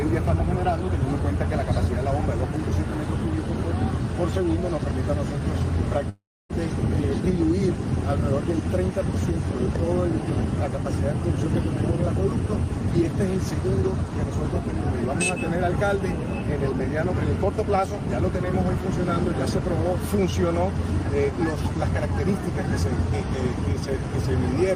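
At 6.09–6.51 s the audio trails off as a fading buzz into about 0.28 s of silence, then resumes with 0.4 s lost, likely a long network dropout.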